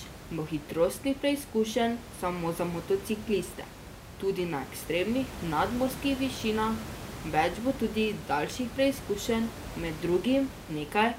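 Nothing goes wrong in this speech recording; the only extra sound is the room's own background noise, sitting about 13 dB under the speech as part of the original recording.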